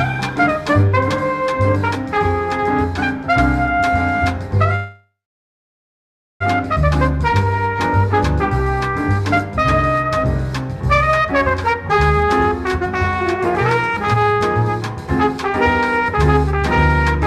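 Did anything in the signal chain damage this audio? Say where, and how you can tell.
Yes. At 4.75 s the audio stops moving forward. The last sound carries on as a tail that fades, then about 1.3 s of silence follows. It picks up again at 6.42 s from exactly where it left off, so nothing is lost. This is a call audio freeze at the network and jitter buffer stage. Packets were likely held up in transit. The receiver filled about 1.65 s and fell that far behind.

The jitter buffer speed-up appears twice. From 11.73 to 12.47 s the sound runs at 121% speed. Pitch stays the same, so it sounds hurried rather than higher. From 13.34 to 16.64 s there is a milder 107% rush. The receiver had too much audio queued. It cut many short pitch-period slices to catch up, removing roughly 150 ms and then roughly 200 ms.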